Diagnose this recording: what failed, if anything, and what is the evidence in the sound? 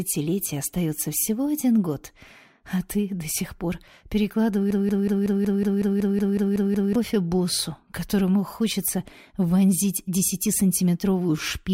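A broken-record loop runs from 4.71 to 6.95 s: one 185 ms fragment repeats exactly twelve times, likely a stalled playback buffer resending its last block.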